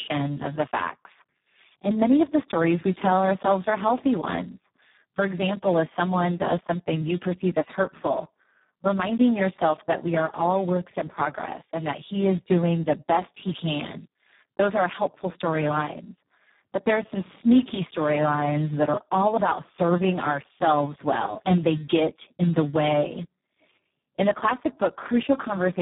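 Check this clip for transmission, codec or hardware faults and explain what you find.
There is one fault, and it runs through the whole clip: heavy Speex codec damage. The speech sounds hoarse, buzzy and partly robotic, and it is dull, with nothing above about 3.8 kHz. Speex is a CELP codec that models the voice as a filter driven by an excitation signal. At very low quality there are too few bits to code that excitation faithfully, which fits a bitrate around 4 kbps, so the voice turns coarse and synthetic.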